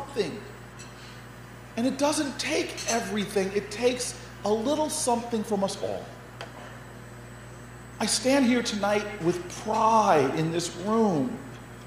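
A steady low 60 Hz tone runs under the sound from start to finish, sitting about 20 dB down: mains hum, from a ground loop or nearby transformer leaking power-line current into the signal.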